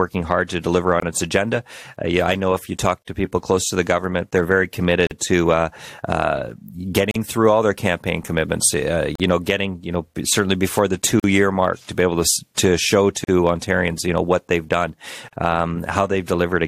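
The speech was encoded in two-second pieces and joined untrimmed, leaving encoder delay and padding at each join. This produces gaps at a join of encoded pieces: a 24 ms hole at 1.00 s, then 43 ms holes at 3.02, 5.07, 7.11, 9.15, 11.20, 13.24 and 15.28 s. Each is a brief, smeared dropout, after which speech resumes exactly where it stopped.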